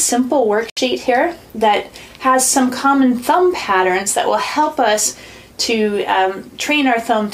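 At about 0.70 s the sound cuts out and comes back at 0.78 s, picking up as if it had kept playing underneath. That's most likely a Bluetooth dropout: packets missed their deadline to the headphones, leaving a silent hole of roughly 70 ms.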